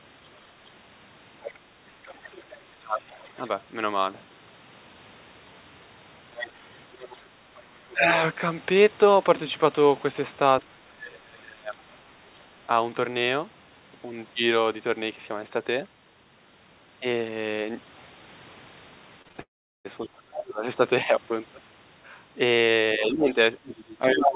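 From 1.42 to 3.48 s a second voice sits faintly behind the speech, about 25 dB down: the other side's voice leaking through, likely because the far end's loudspeaker output reached the talker's microphone and the echo canceller left some of it in. Unlike crosstalk on a line, it is thin and band-limited, like the main voice, since everything passes the same narrowband G.711 path with nothing above 4 kHz. It returns from 6.33 to 7.6 s at about 15 dB down and again from 23.65 to 24.28 s at only about 5 dB down, nearly as loud as the talker.

Within the first leak, from 2.79 to 3.05 s, the talker's own speech sinks by up to about 20 dB for roughly a third of a second. This is speech suppressed in double talk, likely the canceller mistaking the talker for echo while both sides spoke and turning everything down. It differs from a dropout because the voice dips and thins rather than vanishing, and it tracks the overlap. 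Shorter dips follow at 7.91 to 8.12 s (about 15 dB), with deeper ones near 30 dB from 10.67 to 11.96 s and 20.06 to 20.63 s, and a dip of about 20 dB from 22.96 s to the end.

At 19.22, 19.29 and 19.32 s come short concealed packet losses, 20 to 40 ms of audio each, patched by extending the preceding sound. They are heard as brief smears or wobbles, not gaps, since the hole is filled.

From 19.41 to 19.87 s a long network dropout follows, likely a burst of lost packets. About 440 ms is missing, and after the concealment fades, roughly 380 ms of true silence remains before the speech resumes without the lost part.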